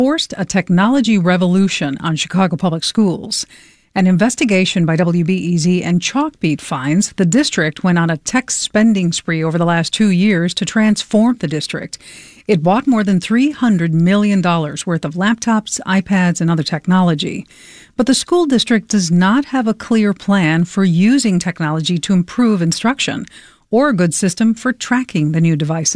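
Nothing in the recording stood out on listening.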